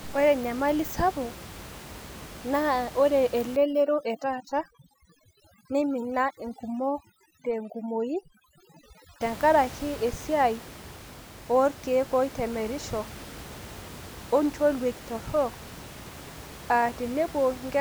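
A speech recording with room noise about 17 dB below the talker, whose background drops and breaks up into twinkling specks from 3.56 to 9.22 s. That is overdone noise removal: an over-aggressive reduction setting is gating frequency bands near the noise level, taking quiet voice detail with them.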